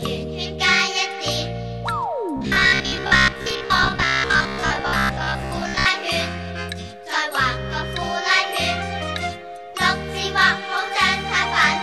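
Robotic sound from repeated short buffers runs from 2.37 to 5.86 s. Across that stretch the audio takes on a stiff, metallic buzz pitched at 66.7 Hz, which points to a block of about 15 ms being replayed over and over. The likely cause is new audio arriving too slowly, so the playback side fills the gaps by looping the last block while most of the real material, around seven tenths of it, is skipped.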